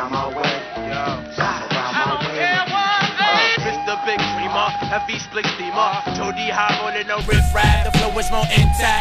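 From the start up to about 7.21 s the audio is band-limited, with nothing above 6 kHz, so it sounds dull and boxy. It also sits roughly 5 dB quieter and carries its own noise floor, around 35 dB under the signal. Then it opens back up with no gap at the change. That's likely the input switched to a poorer device, either a different microphone or a headset's call profile, before returning to the better one.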